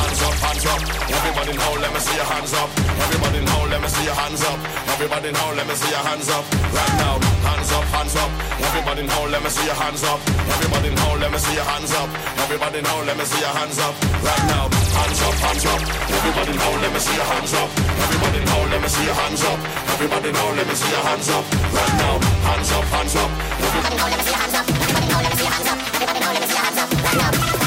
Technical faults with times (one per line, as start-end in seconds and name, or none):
23.81-27.66 section at the wrong speed